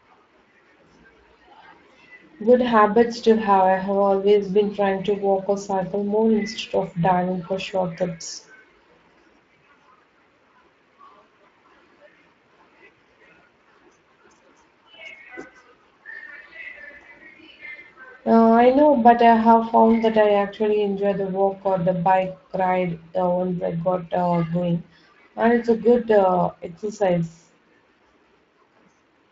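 Speex codec damage runs through the whole of this speech recording, from start to finish, and it is plainly audible. Speex is a CELP coder: it models the vocal tract and spends a small bit budget on the excitation signal, so the speech comes out with a noisy, hoarse roughness. The amount of damage fits a setting of around 20 kbps, where the top band above 8 kHz is only a shaped noise fill rather than real detail.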